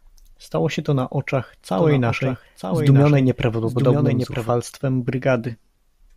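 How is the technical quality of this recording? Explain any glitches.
The recording has one fault, a doubled audio track, from about 1.74 s to 4.50 s, just after "się to na oczach". A second copy of the speech is likely being captured through a slower path and mixed back in about a second late and a few dB quieter. Each phrase returns as a dry, full-band repeat with no decay or room colour, overlapping the live speech, and the copy cuts in and out abruptly.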